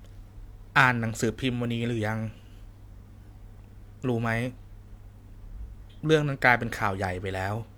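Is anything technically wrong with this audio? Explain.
Yes. From 5.90 to 5.99 s the speech lurches forward: a short stretch is simply missing, about 150 ms of sound. These are compressed frames skipped. Whole blocks of the coded audio were either absent from the file or rejected by the decoder as corrupt, so playback jumps ahead by whole frames.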